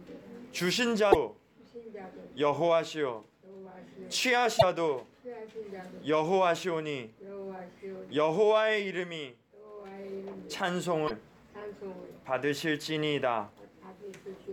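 Three brief glitches break into the audio, at 1.09 to 1.15 s, 4.56 to 4.63 s and 11.04 to 11.11 s, each lasting about 70 ms. This is damaged data in a compressed stream: corrupted frames are misread, so the decoder loses sync and hunts for the next valid frame header.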